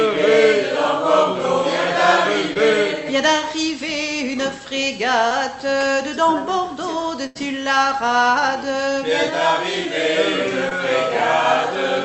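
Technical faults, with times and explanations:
2.53–2.57 s, 5.29–5.32 s and 10.69–10.73 s, short concealed packet loss: each time about 20 ms of audio failed to arrive, and the receiver covered the hole by extending the preceding sound for roughly 13 to 18 ms before cross-fading back. This is heard as a brief smear or wobble. On a spectrogram, each shows as a thin vertical strip where harmonics flatten or turn smooth and noisy. The waveform shows a repeated cycle or a slight envelope dip.
7.26–7.37 s, burst of packet loss: about 80 ms went missing in a row, and the concealment stretched the last sound over about 86 ms, fading it down as it went. A voiced moment turns into a held, thinning buzz, and a noisy one into a dying hiss, before the sound picks up further along with that stretch gone. On a spectrogram, this appears as a frozen, decaying band. The waveform tapers and then jumps to unrelated material. 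All of it sits inside a call path whose audible band stops near 8 kHz.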